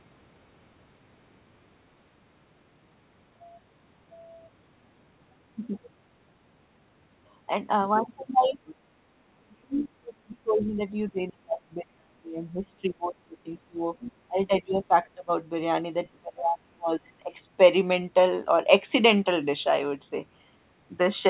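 From 8.44 to 8.74 s a faint second voice, about 25 dB under the speech, slips in; this is likely the other side's voice leaking through an incompletely cancelled loudspeaker echo. Within it, from 8.49 to 8.58 s, the speech dips briefly by roughly 10 dB, likely speech suppressed in double talk as the echo canceller turns everything down. From 9.24 to 13.85 s the speech drops away in pieces, up to roughly 35 dB, across about four seconds. Short scraps of the far voice, about 30 dB down, poke through at 11.16 to 11.20 s and 12.44 to 12.48 s. A louder leak, about 15 dB below the speech, follows at 14.00 to 14.12 s. The speech is then pushed down again, by roughly 25 dB from 14.27 to 15.31 s and roughly 30 dB from 16.21 to 17.33 s. Throughout, the band-limited sound stops at 4 kHz, as the G.711 call path does.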